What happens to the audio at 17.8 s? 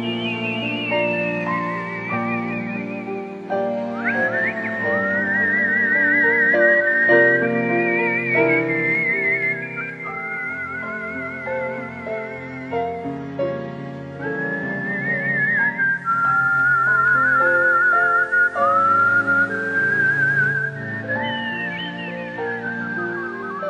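At 17.8 s the audio is inside a digital radio blending to analogue, running from 15.73 to 20.91 s. The receiver lost its digital stream and cross-faded over about half a second to the station's FM broadcast, then back. During that stretch the level drops by about 1 dB, and hiss sits roughly 35 dB below the signal. Unlike a simple filter or dropout, the change fades in and out smoothly and brings steady FM hiss with it.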